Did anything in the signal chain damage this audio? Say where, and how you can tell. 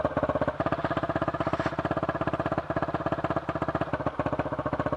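Yes. From 0.56 s to 3.92 s the sound runs fast and sits higher than the rest of the clip. This is a wrong sample rate fault at the playback stage. Speed rises by a factor of 1.09 and pitch by about 1.5 semitones, always together. That locked pairing is the tell. Samples were clocked out faster than they were captured, with no resampling. The ratio fits material recorded at 22 kHz but played at 24 kHz.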